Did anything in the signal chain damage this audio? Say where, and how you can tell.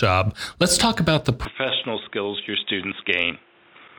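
Yes. At 1.45 s, right after "talk about the", the sound turns dull and boxy through to the end, likely because the input switched to a poorer device. The spectrogram shows content above 3.8 kHz cut off cleanly with no gap, a new noise floor roughly 30 dB down, and a waveform drop of about 5 dB.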